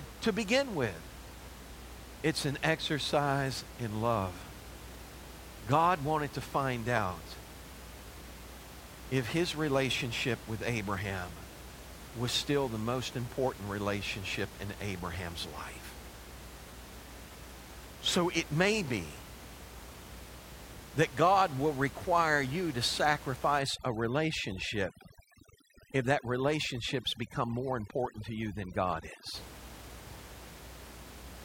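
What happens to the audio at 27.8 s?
At 27.8 s the speech is under overdone noise removal, which runs from 23.59 s to 29.35 s. The denoiser is set so hard that it pulls down any frequency band sitting near its noise estimate, taking quiet parts of the voice along with the noise. The room noise, about 17 dB below the speech, drops and breaks up into twinkling specks.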